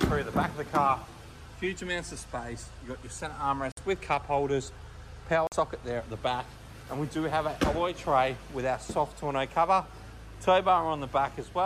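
The wireless link most likely lost packets to interference, leaving the headphones' buffer empty: a Bluetooth stall at 3.72 s and again at 5.47 s. Each time the sound cuts to silence, for 55 ms and 48 ms, then resumes where it stopped or slightly later.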